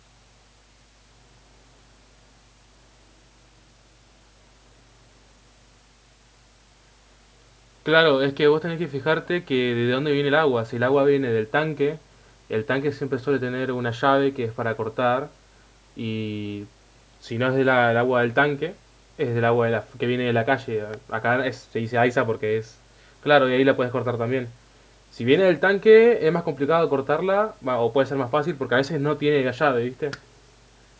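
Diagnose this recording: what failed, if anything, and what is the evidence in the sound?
Nothing failed: the speech shows only the expected signature of call microphone processing, with the lowest bass trimmed by its high-pass filter and no content above 8 kHz, both normal for that path.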